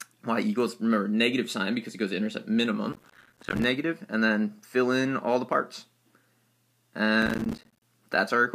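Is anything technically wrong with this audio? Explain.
Yes. Processor overload crackle occurs at 2.93–3.64 s and 7.22–7.83 s. Repeated missed buffer deadlines, fitting buffers of about 5 ms, drop in hard-edged silent gaps that sound as gritty crackle.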